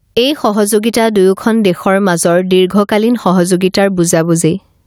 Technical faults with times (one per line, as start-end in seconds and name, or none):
0.00-4.86 gain pumping